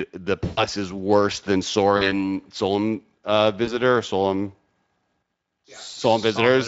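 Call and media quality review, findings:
VoIP packet loss concealed by the speech codec at 0.45–0.65 s, 1.97–2.18 s, 3.65–3.79 s and 5.91–5.95 s: speech smears into a buzzy, fading tone. Lost audio, about 120 ms at 0.45 s (which fits six 20 ms frames), 40 ms at 1.97 s and 20 ms at each later dropout, extrapolated by the Speex decoder. Degradation outlasts the gap while the decoder state recovers.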